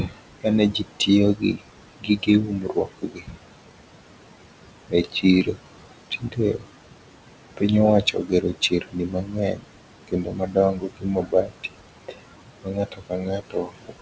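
Noise suppressor artifacts run through the whole speech clip. The room noise, sitting about 11 dB under the speech, is pushed down by about 21 dB between phrases, leaving residue that shows as speckled, blinking patches on a spectrogram. Speech cut by the noise suppressor follows at 0.0–1.64, 2.0–3.38, 4.88–5.63, 6.11–6.66, 8.02–9.77, 10.08–12.21 and 12.62–14.01 s. There, quiet syllables were mistaken for noise and dropped by about 18 to 22 dB, sounding swallowed. On the waveform they appear as sudden envelope dips, and on the spectrogram as faded gaps, all beneath the G.722 band edge at 8 kHz.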